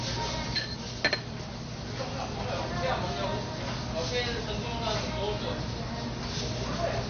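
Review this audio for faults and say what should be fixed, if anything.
From start to finish the audio sounds dull and muffled, with nothing above about 6.5 kHz, and a gurgling, granular roughness runs through it as the upper detail flickers in and out. This is likely MP2 compression at a low bitrate, which fits roughly 48 kbps. With so few bits to share among its sub-bands, the encoder switches off the upper bands entirely and quantises the remaining ones coarsely, producing that watery grain. To prevent it, encode at a much higher bitrate or use a more efficient codec, and keep the original uncompressed master as the source.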